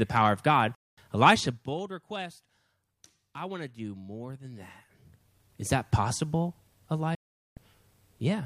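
At 0.75 s the speech cuts out in a digital broadcast dropout. The receiver stopped getting good frames and muted, with a fade of only about 3 ms, so it sounds like a sudden hole. It comes back at 0.98 s. About 0.22 s of audio is simply gone, which fits roughly seven lost frames. A second, longer one hits at 7.15 s, right after "that possible". That gap lasts about 0.42 s, which points to something like thirteen frames, and sound returns at 7.57 s.

From 1.32 s to 1.79 s there's zipper noise. The level drops by something like 15 dB, but it's applied in unsmoothed 2 dB steps, around twenty a second. Each jump leaves a tiny click, and together they make a fine ticking texture riding on the speech while the level slides down.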